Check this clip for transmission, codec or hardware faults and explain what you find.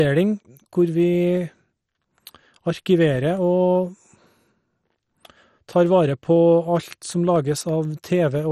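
Two faults are present: codec damage across the whole clip, and a regular series of brief dropouts.

Throughout, the speech sounds dull and granular, with a gurgling quality and nothing above 14.6 kHz. This points to MP2 compression, likely at a low bitrate around 56 kbps. MPEG Layer II divides the spectrum into 32 sub-bands and allocates bits to each. When bits run short, upper bands are switched off, and the bands that remain flicker and are coarsely quantised, which produces the heavy damage heard here.

From 0.37 s to 8.35 s there are periodic USB or driver dropouts every 0.5 s, about fifteen in all. Each is a tiny skip, well under a millisecond of audio lost with nothing put in its place. A recurring task stalls the USB bus or audio driver on a fixed schedule, so the losses are evenly spaced. They are heard as regular ticks during the speech.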